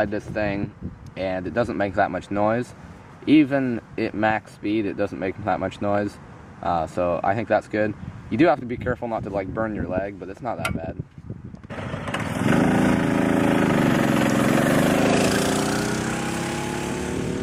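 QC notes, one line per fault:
No technical faults are audible anywhere in the signal.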